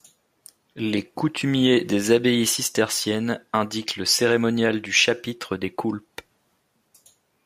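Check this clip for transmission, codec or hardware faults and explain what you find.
Listening through the speech, nothing stood out as a transmission, codec or hardware problem.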